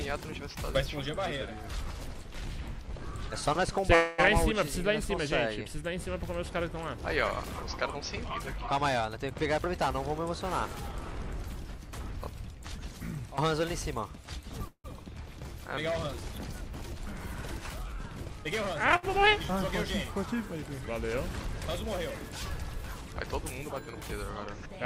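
At 3.95–4.20 s a call audio freeze holds the sound as a fading buzz for 228 ms, likely an emptied jitter buffer; playback resumes where it stopped, nothing lost. From 9.10 to 9.78 s a jitter buffer speed-up trims pitch periods, about 0.1 s in total, running at 116% speed and sounding hurried at unchanged pitch. Milder 104% speed-ups follow at 10.92–12.84 s (about 0.1 s removed) and 22.45–23.62 s (about 50 ms). At 14.68–14.86 s another freeze fills 164 ms, including 70 ms of silence, likely from delayed packets. At 18.96–19.05 s a short stall from a late packet stretches the preceding sound by 68 ms before continuing.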